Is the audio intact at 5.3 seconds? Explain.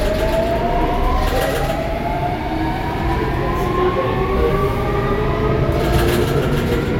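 Yes, the audio is intact at 5.3 seconds, with no dropout, click, distortion or other technical fault at that moment.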